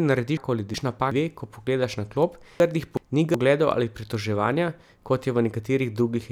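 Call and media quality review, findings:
Chunks out of order, 0.37–1.12 s, just before "dve ko": jumbled, garbled stretch. Likely buffer/jitter handling. One chunk of about 0.37 s landed a chunk late, so two neighbours play swapped. Nothing lost, just misordered with hard splices.

Chunks out of order again, 2.60–3.34 s, right after "na klop": same scrambled blip, same chunk size, one chunk late. Looks like the same reordering path firing twice.

Dropped samples at 1.85 s, between "dve ko" and "na klop": single sharp click, thin vertical line on the spectrogram. Likely a tiny sample drop, well under a millisecond, so the waveform jumps a step. No audible gap.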